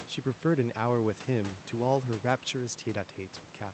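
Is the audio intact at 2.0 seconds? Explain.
Yes, at 2.0 seconds the speech is intact, with no dropout, glitch or other fault, only the room noise well below the speech and the ordinary coding character of the call path.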